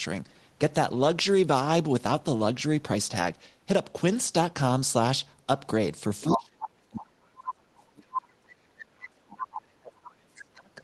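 At 6.22 s a short burst of the other side's voice leaking through pops up for about 0.2 s, roughly as loud as the talker. That's likely residual loudspeaker echo the canceller didn't strip from the mic.

From 6.24 to 8.48 s, and again from 8.73 s to the end, the talker's speech is suppressed in double talk. The canceller likely can't separate near voice from echo, so it pulls the speech down by as much as about 40 dB, and the speech fades and chops out.

Another faint leak shows up at 10.04 s, about 25 dB under the speech.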